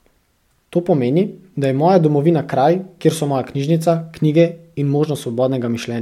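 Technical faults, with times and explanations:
No technical faults detected.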